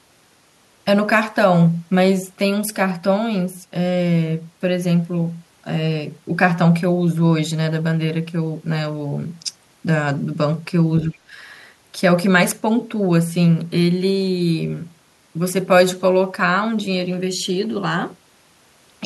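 From 11.0 to 11.24 s, the echo canceller likely confused overlapping talk with echo. Speech is suppressed in double talk, and the voice briefly dips by about 20 dB.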